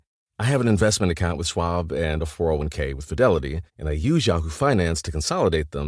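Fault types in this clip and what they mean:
No fault types can be heard in this clip.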